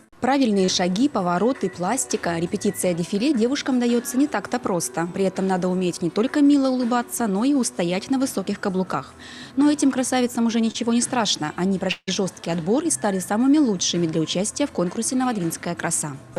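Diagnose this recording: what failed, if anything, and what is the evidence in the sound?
Short concealed packet loss in the network path, at 0.65 s and 10.71 s: each time about 20 ms of audio went missing and the decoder bridged it with roughly 25 to 30 ms of continued sound. A spectrogram shows briefly smeared, frozen harmonics; the waveform shows repeated pitch cycles before blending back.

From 11.91 s to 12.09 s about 160 ms is lost. The decoder extends the last sound as a fading buzz, leaving roughly 30 ms of silence before audio resumes further on. That is likely a long network dropout, visible as a decaying, repetitive smear then a blank gap.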